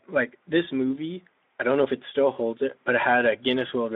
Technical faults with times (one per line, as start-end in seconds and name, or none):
none